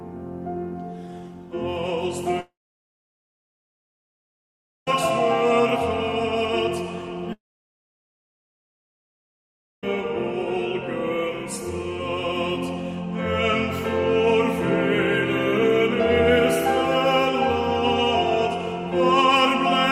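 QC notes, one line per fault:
2.40–4.88 s, long network dropout: the sound carries on briefly as a fading buzz or hiss, then goes silent for about 2.35 s and returns later with roughly 2.5 s missing. This is likely a stall in packet delivery that the receiver masks with concealment.
7.33–9.84 s, long network dropout: the same fading buzz or hiss gives way to about 2.45 s of silence, and the audio resumes with 2.5 s lost. The cause is likely another interruption in the stream, with the gap filled rather than recovered.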